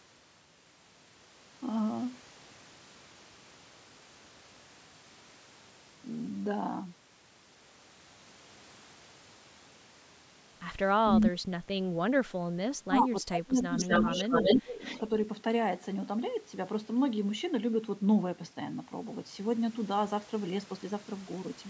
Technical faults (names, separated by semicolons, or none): speech suppressed in double talk; echo leak